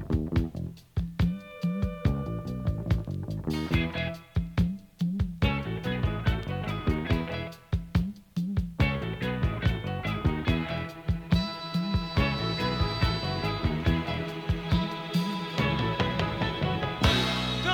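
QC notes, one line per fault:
No technical faults are audible anywhere in the signal.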